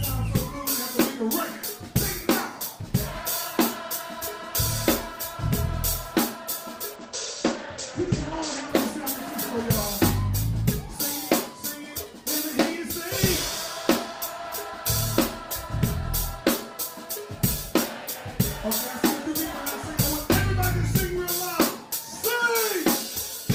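From 6.97 to 9.73 s there's a call bitrate drop: the encoder got starved of bits, so the top end collapses to about 8 kHz and the sound turns muffled and a bit watery. It bottoms out for roughly 1.7 s, which fits a fall from around 32 to 13 kbps.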